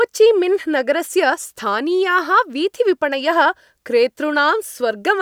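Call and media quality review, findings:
No findings in this call and media quality review.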